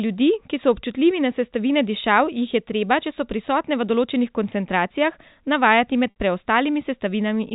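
A speech clip carried over G.711 telephone coding, whose 4 kHz band limit is audible. At 6.1 to 6.14 s the sound briefly holds on a buzzy, repeated tone before fading. This is packet loss with pitch repetition: roughly 60 ms of audio went missing, which fits three lost packets, and the receiver looped the last pitch period to cover the gap.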